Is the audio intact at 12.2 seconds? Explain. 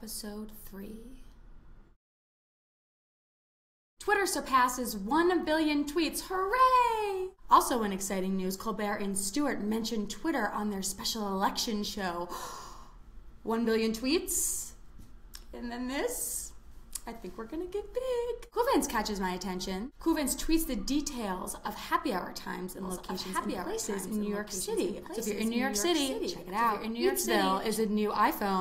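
Yes, the audio is intact at 12.2 s, with no dropout, click, distortion or other fault audible at that moment.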